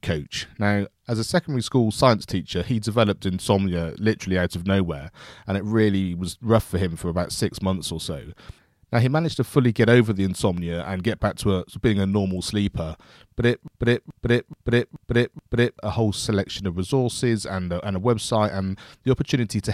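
At 13.68 s the speech catches in a broken-record loop: a 428 ms fragment repeats back to back, five times, until 15.79 s. Whatever should have played there is gone. It's likely the player or stream stalled and kept resending its last buffer.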